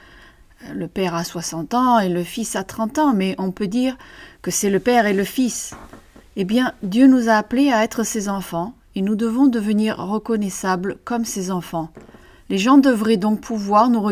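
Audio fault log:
No faults heard.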